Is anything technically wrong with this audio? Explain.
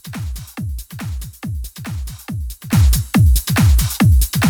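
Yes, there's a sudden gain jump at 2.73 s that lasts right to the end. The level leaps up by about 14 dB in one step, background included, likely from a gain setting applied instantly with no ramp to ease it in.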